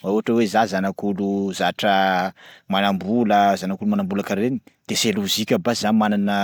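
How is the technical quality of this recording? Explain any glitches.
Nothing in the recording stood out as a technical problem on listening.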